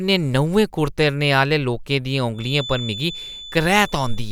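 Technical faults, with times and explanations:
2.32–4.32 s, feedback whistle: a thin, steady 3.5 kHz tone, about 15 dB below the speech and swelling and fading slowly in level, runs to the end, likely from a loudspeaker-to-microphone loop held just at the edge of feedback without running away.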